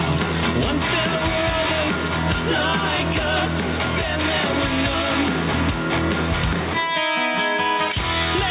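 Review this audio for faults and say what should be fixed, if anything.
Gain pumping runs through the whole clip. The gain swings by around 10 dB, pulling down under every loud sound. Loud and soft parts sit squashed together. The likely cause is input gain set far too high, with a fast limiter or compressor clamping it down on each peak. The audio is also cut off above 4 kHz, which fits a narrowband call codec. To prevent the pumping, lower the microphone gain so the limiter rarely engages.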